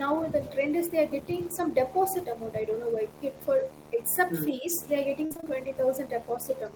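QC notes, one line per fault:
throughout: video or display buzz, a steady 75 Hz field-rate buzz with hash above it, about 15 dB below the speech, from a screen or video cable coupling in.
3.93–4.00 s and 4.51–4.69 s: speech suppressed in double talk. The speech dips briefly, by a few dB then about 10 dB, likely an echo canceller ducking during simultaneous talk.
5.25–5.48 s: repeated packet loss (robotic sound). Five closely spaced holes, the longest 50 ms, with about half the span patched by repeating the last sound, giving choppy speech with pieces missing.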